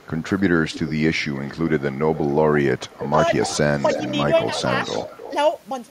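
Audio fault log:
0.00–1.82 s, 2.14–2.96 s, 3.43–5.31 s: echo leak. A faint copy of the speech trails about 300 ms behind, roughly 15 dB down, then about 10 dB down in the last stretch. The likely cause is a loudspeaker-end echo canceller passing residual pickup back. A spectrogram shows ghost harmonic tracks offset 0.3 s to the right.
2.97–3.07 s: speech suppressed in double talk. The speech level drops by up to about 15 dB for roughly 100 ms, likely because the echo canceller treated overlapping talk as echo and attenuated it. The waveform shows a brief notch in the envelope, and the spectrogram a short, faded vertical strip.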